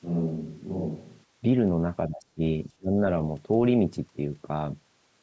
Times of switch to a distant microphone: 0.00-1.24

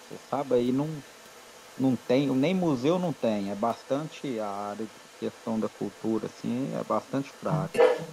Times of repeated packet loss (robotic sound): none

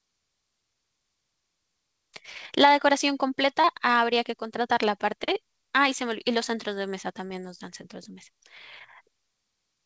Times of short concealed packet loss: 2.33-2.38, 3.61-3.66, 7.26-7.32

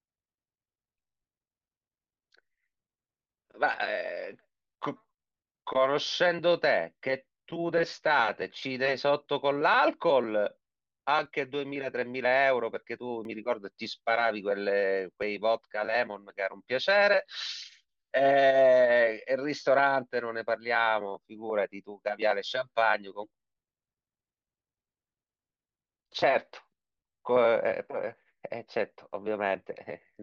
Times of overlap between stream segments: 13.25, 15.22

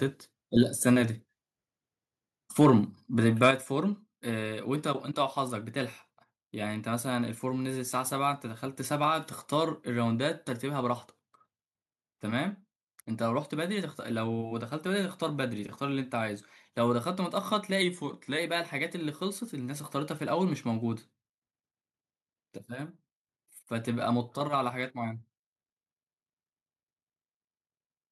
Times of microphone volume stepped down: 3.51

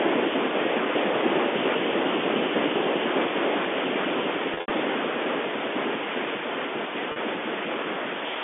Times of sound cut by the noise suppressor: none

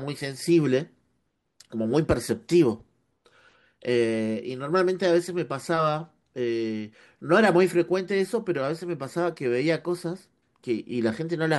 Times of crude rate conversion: 9.87-11.58

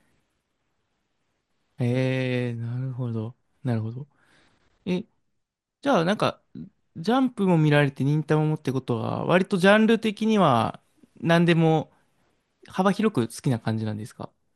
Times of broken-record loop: none

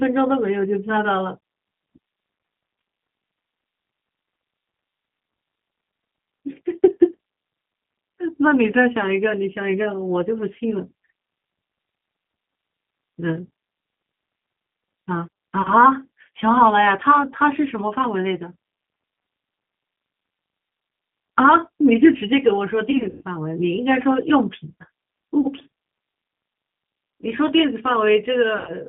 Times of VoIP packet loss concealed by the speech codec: 15.62-15.72, 22.91-23.23, 25.41-25.47, 28.58-28.87

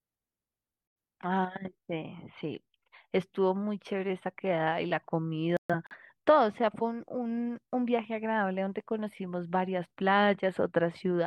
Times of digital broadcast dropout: 0.87-0.96, 5.57-5.96

